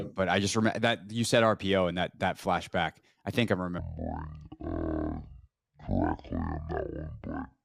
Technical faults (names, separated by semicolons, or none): stereo read as mono